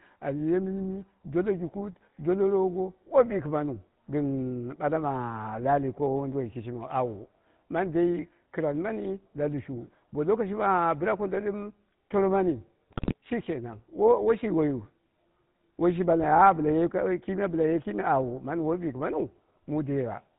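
From the start, the speech carries the GSM full-rate codec's signature: a buzzy, gravelly roughness that is plainly audible, consistent with a 13 kbps stream. The codec rebuilds each voice from a vocal-tract filter excited by evenly spaced pulses, so the fine texture of the voice is replaced by a coarse, regular drive. On a spectrogram everything stops sharply at 4 kHz, and the harmonics look smeared and grainy rather than cleanly drawn.

Between 12.90 and 13.16 s, just after "tomo mani" and just before "shi kenan", GSM bit errors take over. Corrupted bits reach the decoder, scrambling filter, pitch and gain values, so the audio squawks, pops and gargles. The damage suggests a few percent of bits flipped across roughly a dozen frames. The waveform shows abrupt level spikes and jagged bursts, and the spectrogram shows blocky, frame-sized patches of misplaced energy.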